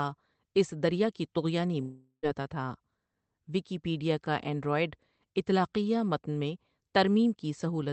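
A speech clip with a long network dropout from 1.81 to 2.26 s. The last sound is stretched into a fading buzz, and then there is about 0.1 s of near silence. About 0.42 s of speech is missing, and the talk resumes further on with nothing of the lost part. This is likely audio that stopped arriving, so the receiver could only fill the gap with concealment. The high end stops around 8 kHz, which fits a call codec such as Opus at a modest bitrate.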